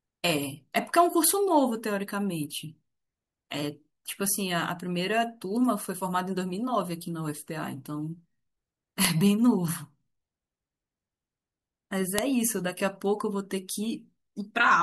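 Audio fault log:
9.05 s and 12.19 s: file header played as audio. Leftover header bytes at each joined piece's start play as samples, giving loud snaps that ignore the speech.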